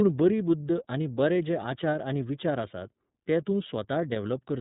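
Throughout the speech, iLBC codec damage is plainly audible: nothing above 3.8 kHz survives, and the voice has a rough, synthetic edge. Unlike a plain low-pass filter, each block is coded independently, using 30 ms frames at about 13.33 kbps.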